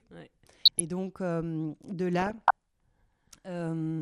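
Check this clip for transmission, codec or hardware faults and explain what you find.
Two faults are audible in this speech: codec damage throughout, and two bursts of DAB burbling.

MP2 compression, throughout: a likely low-rate MPEG Layer II encode, around 80 kbps, starves sub-bands of bits, leaving the speech dull, granular and gurgling.

DAB burbling, 0.43–0.81 s and 2.20–2.51 s: bit errors slip past the error correction into the audio data, putting short blips of noise into single sub-bands. The second burst sounds more corrupted.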